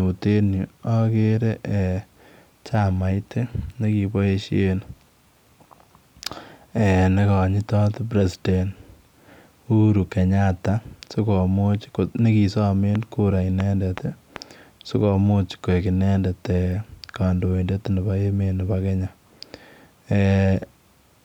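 A speech clip with a short train of clicks from 12.95 to 14.37 s: about four uneven pops, roughly two a second, sitting well above the voice, likely interference or a faulty connection.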